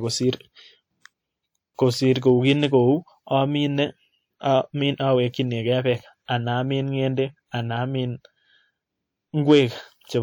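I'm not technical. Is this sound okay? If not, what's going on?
No, there are two kinds of problems. First, pre-echo from 1.74 to 1.79 s: the compression step smears some noise backwards in time, so a short hiss creeps in just before a sudden sound starts, and that sound's start comes out soft and blurred.

Second, hard clipping from 2.28 to 2.75 s and again from 9.50 to 9.60 s. The sound got louder than one stage could handle, so the tops of the loudest bits were sliced flat. That flattening adds extra high-pitched content that wasn't there, so those moments sound distorted.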